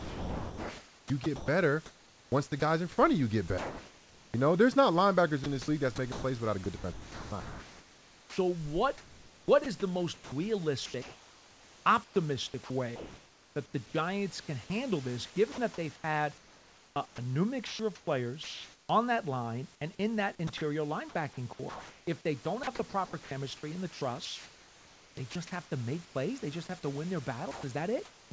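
Speech heard through a G.722 call path with nothing above 8 kHz, with three faults. From 0.00 to 26.15 s the speech is sound chopped by the voice detector: about 10 s in total flips between real sound and synthetic fill, likely from the sender toggling transmission. At 27.51 to 27.63 s the sound is dropped by the voice detector, with about 80 ms of speech replaced by comfort noise, likely a single missed trigger rather than repeated switching. From 27.51 to 28.31 s comfort noise replaces the background for about 380 ms in total, a smoother noise instead of the room's own noise, likely from discontinuous transmission.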